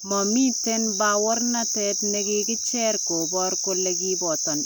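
No technical fault can be heard anywhere in this speech recording. Nothing in the sound points to any stage of the chain going wrong.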